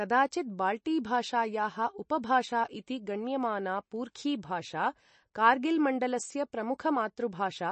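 Throughout, nothing sounds above 8.3 kHz. The plainly audible watery swirl suggests likely MP3 compression. Bits ran short, which fits roughly 33 kbps.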